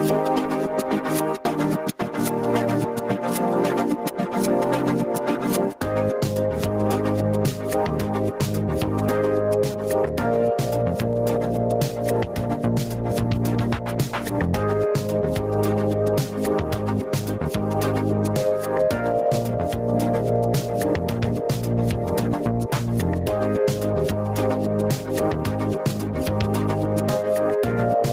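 Throughout the audio the level swings by around 15 dB, leaving loud and soft parts squashed together. This is gain pumping, likely from input gain set far too high with a fast limiter clamping down on peaks.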